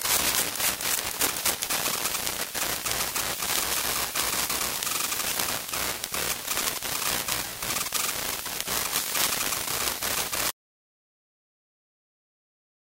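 At 5.32 s, compressed frames were skipped: a few 24 ms frames were not played, so the audio jumps ahead about 70 ms. From 10.51 s, an audio dropout to silence runs to the end, likely from a lost input while recording continued, leaving total silence without room tone.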